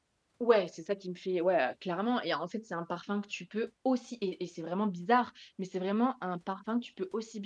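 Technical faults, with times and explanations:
No technical faults can be heard in this clip.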